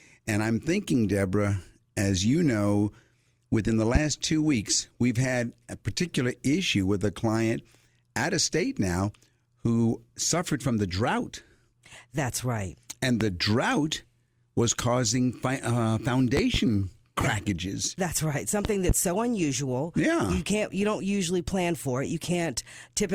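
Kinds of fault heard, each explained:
Loud pop: A sudden voltage spike, likely from a plug, switch or static discharge, lands on top of the speech. It strikes four times here, peaking roughly 15 dB above the signal. The last two are double pops. The speech continues underneath.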